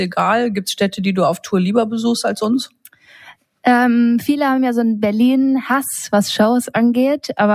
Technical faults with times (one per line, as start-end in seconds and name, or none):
2.67-3.16 sound cut by the noise suppressor